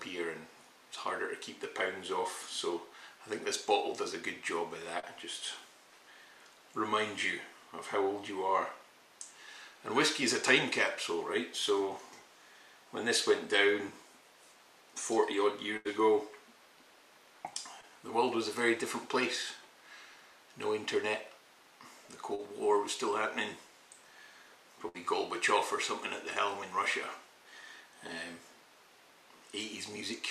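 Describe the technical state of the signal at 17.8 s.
At 17.81 s, about 20 ms of audio failed to reach the decoder in time, a short concealed packet loss. The receiver covered the gap by extending what it had last decoded, roughly 18 ms of substitute signal carried forward from the preceding pitch or as shaped noise, then blended back into real audio by 17.85 s. What you hear is a brief smear or wobble, and a very short sound landing in that gap could drop out entirely.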